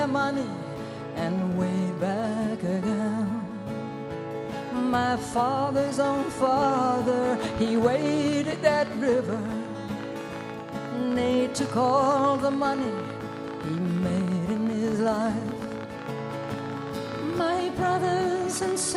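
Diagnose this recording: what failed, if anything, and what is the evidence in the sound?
A train of clicks runs from 6.47 s to 18.93 s, around 13 per second at uneven spacing and peaking about 5 dB above the sound. The near-identical pulses likely come from nearby equipment interference in the analogue wiring, or from a faulty connection or power supply.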